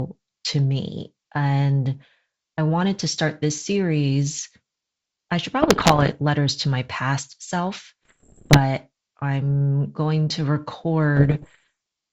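Bit errors on an ADPCM link hit the speech from 5.62 to 6.13 s after "I should", 8.03 to 8.59 s and 11.17 to 11.69 s, producing pops and rough bursts with brief level jumps.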